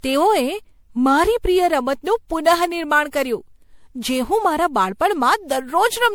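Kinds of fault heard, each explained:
Generation loss: the speech sounds swirly, smeared and hollow throughout, likely from around seven repeated lossy MP3 passes at a rate fitting 96 kbit/s, each requantising on a shifted frame grid. A spectrogram shows piled-up spectral holes, softened onsets and nothing above 20.8 kHz.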